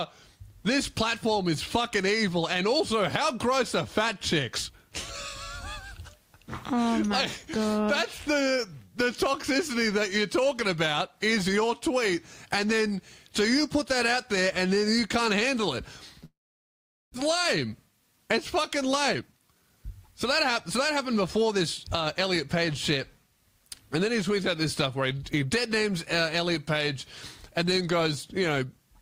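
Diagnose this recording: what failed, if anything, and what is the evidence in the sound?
At 16.25 s the sound breaks off. For a short moment the last sound carries on as a fading buzz, then there is about 0.8 s of silence until the audio returns at 17.16 s. Roughly 0.6 s of material is simply gone, and the playout point jumps by about 0.3 s. This is a long network dropout, likely a loss of incoming packets. The receiver's concealment extended the last sound briefly, then gave up and muted.

From 19.14 s to 21.52 s the audio runs at about 110% speed while the pitch stays the same, so this stretch sounds hurried. This is a jitter buffer speed-up. After the interruption the receive buffer was holding more audio than its target, and the receiver drained the excess by repeatedly cutting out short pitch-period segments. Over this stretch that removes roughly 0.3 s, which brings the latency back down.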